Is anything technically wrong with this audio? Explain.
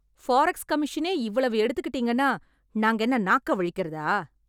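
No, nothing technically wrong turns up anywhere in this short bit of speech.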